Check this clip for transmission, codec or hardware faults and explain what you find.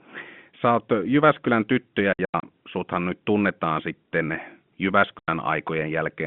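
There's one kind of fault here: packet loss filled with silence. Between 2.13 and 2.43 s, just before "suthan nyt tunnetaan sitten", about 180 ms drops out in scattered holes, the longest 90 ms. A single 90 ms hole follows at 5.19 s. Missing packets were replaced with dead silence, so the hole sizes fit 30 ms packets. Each gap starts and stops with hard edges, chopping the narrowband G.711 phone audio.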